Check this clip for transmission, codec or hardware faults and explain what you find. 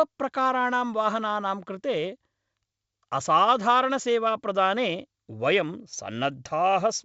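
No transmission, codec or hardware faults are audible here.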